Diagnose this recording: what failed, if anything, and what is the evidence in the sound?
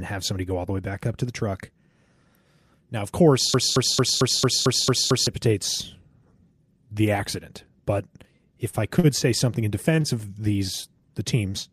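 A broken-record loop at 3.54 to 5.27 s. One 224 ms fragment repeats eight times. The player or stream likely stalled and replayed its buffer.

Short stalls from late packets at the network stage, at 8.69, 8.99 (before "say something in"), 9.96 and 10.01 s. The speech is held 35, 45, 19 and 20 ms.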